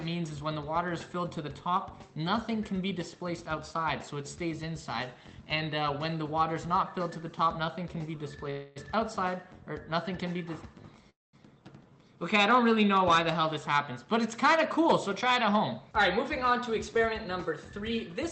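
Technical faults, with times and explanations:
8.50 to 8.78 s and 11.10 to 11.35 s, call audio freeze: Packets were likely held up in transit, so the jitter buffer emptied and the receiver stretched the last sound to fill the wait, about 257 ms the first time and 234 ms the second. In the second freeze that fill fades into about 200 ms of silence. Nothing is lost; the sound resumes where it stopped, now running later by the length of each gap.
14.53 to 18.25 s, jitter buffer speed-up: The buffer held more audio than it targets, so the receiver repeatedly cut out short pitch-period slices, about 150 ms in total. Playback runs at roughly 104% speed with unchanged pitch.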